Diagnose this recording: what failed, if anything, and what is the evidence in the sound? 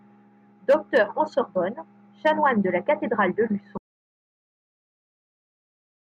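An audio dropout to silence starts at 3.78 s and runs to the end. The speech cuts off mid-flow. After that there is silence, with no room tone. The input was likely lost through a disconnected device, failed link or mute, while the recorder kept writing zeros.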